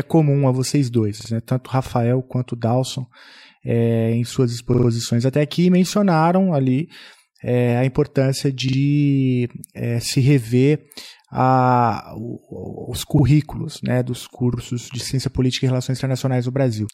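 Repeated buffer stutters occur at 1.21, 4.74, 8.68, 13.19 and 14.54 s. A 46 ms chunk, fitting a 2048-sample buffer, replays one to three extra times when new audio arrives late. Unlike a dropout, there's no silent gap: an identical fragment repeats with hard joins.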